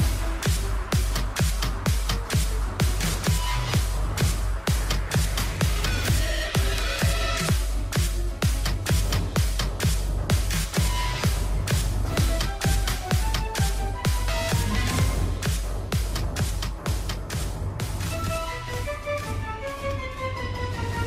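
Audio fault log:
No faults heard in this clip.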